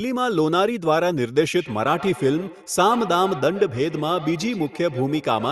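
From 1.56 s to the end, feedback echo between two devices sets in. The speech returns roughly every 150 ms, at most about 14 dB down. Each pass sounds thinner and more ringing.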